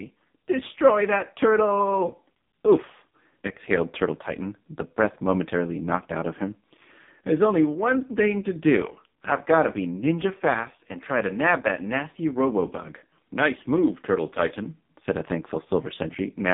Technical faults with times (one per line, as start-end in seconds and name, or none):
0.00-16.53 AMR narrowband mobile codec